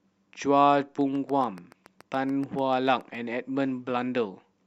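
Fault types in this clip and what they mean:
Train of clicks: a run of short, near-identical pulses laid over the speech from about 1.01 to 3.16 s, arriving at a steady 7 per second, roughly fifteen in all, with peaks close to the level of the speech itself, so they tick audibly even through the talking. This is likely interference from nearby equipment or a faulty connection or power supply. The waveform shows evenly spaced narrow spikes, and a spectrogram shows thin vertical broadband lines at regular intervals.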